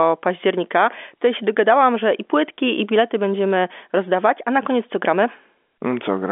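Nothing here stands out as a fault: it's a speech recording that comes across as an ordinary telephone line, with the narrow band of roughly 250 Hz to 3.5 kHz that telephone coding like G.711 gives.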